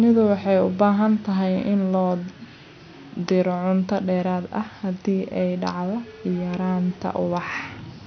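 The speech recording has no technical faults. A low background noise from the room sits about 35 dB below the speech and belongs to the recording itself.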